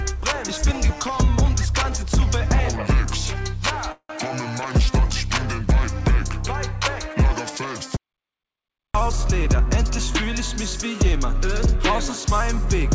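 At 3.92 s a call audio freeze begins and lasts until 4.11 s. The last sound is stretched into a short fading buzz that ends in about 70 ms of quiet, and then the audio picks up exactly where it left off. About 174 ms has been inserted and nothing is lost, and the whole signal now runs that much later. The likely cause is packets held up in transit that emptied the jitter buffer. The decaying fill and the seamless resumption mark it as a freeze rather than a dropout.

From 7.97 s to 8.95 s an audio dropout to silence cuts the sound off mid-flow. It leaves nearly a second, about 980 ms, of silence with no room tone at all. The sound returns partway through, and whatever occurred in that gap is gone. The likely cause is a lost input, such as a disconnected device or a failed link, while writing continued. Unlike the freeze, nothing fades, and the content skips forward.

Two jitter buffer speed-ups follow. 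The first, from 9.07 s to 10.40 s, runs at 105%. The second, from 10.85 s to 11.76 s, runs at 104%. The receiver trims repeated pitch-period-sized slices to shed excess buffered delay, roughly 70 ms in the first stretch and 40 ms in the second. The first stretch sounds hurried while its pitch stays unchanged, which separates this from a resampling error. Throughout, the call codec's band limit leaves nothing above 8 kHz, which fits G.722 at its usual 64 kbps.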